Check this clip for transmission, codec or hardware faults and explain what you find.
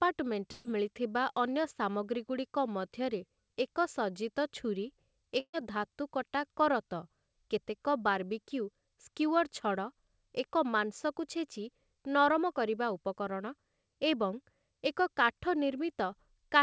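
Two bursts of packet loss break into the speech, at 0.52 to 0.67 s and again at 5.40 to 5.55 s.

At each point the last sound is stretched into a held buzz or hiss that fades for about 130 ms, and the second gap also falls silent for about 60 ms. This is the receiver concealing lost packets. When playback resumes, roughly 120 ms and 140 ms of speech are missing.

The call path itself is audible as its usual coding noise and a band limit at 8 kHz, which fits G.722.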